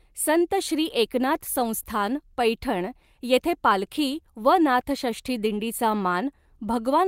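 Clock drift between sender and receiver runs through the whole speech clip. The sender's clock runs about 3 percent slow. The receiver's jitter buffer keeps draining as a result. It has to fill the gap somehow, so timing hiccups recur at uneven intervals.

Repeated timing corrections follow from that, from 0.08 s to 6.82 s. The receiver repeats short pieces to stay in step. Playback moves at 97 percent speed. Together the repeats add roughly a fifth of a second. They come across as slight stutters and a faintly dragging, unsteady tempo.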